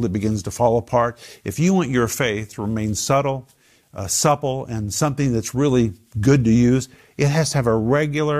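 Nothing in this recording trips any alarm, just speech rolling along without a single hitch worth pointing to.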